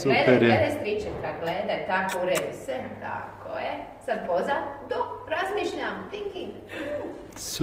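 At 4.87 s the audio switches abruptly to an adaptive stream at a lower bitrate and stays there to the end. The connection slowed and the player moved to a leaner encoding, consistent with Opus falling from 64 to 16 kbit/s. The sound takes on more codec artefacts. Unlike a dropout or packet loss, there is no gap or stutter, only an instant, sustained drop in quality.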